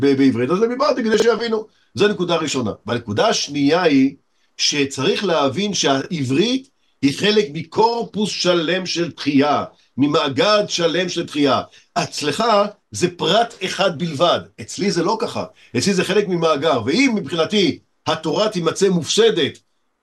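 Brief jumbled moments at 1.14 to 1.22 s and 6.02 to 6.06 s are chunks out of order: a 20 ms block plays late, behind the blocks that should follow it, leaving hard joins.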